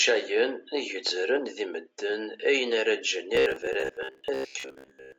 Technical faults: robotic sound from repeated short buffers

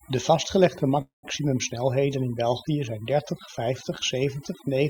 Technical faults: overdone noise removal; call audio freeze

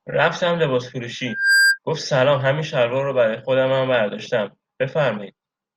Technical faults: loudspeaker feedback squeal

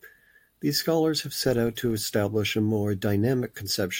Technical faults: filter restarted on every block

